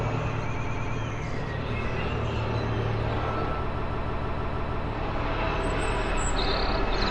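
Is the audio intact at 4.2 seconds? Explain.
No. From 3.75 to 4.85 s the sound stutters: the same short stretch, about 157 ms long, plays over and over, seven extra times in a row, so 4.2 s falls inside the loop. This is repeated frames. A run of compressed frames, which fits a block of about six frames, was written or sent more than once, and the decoder replays it each time, stretching the audio by about 1.1 s.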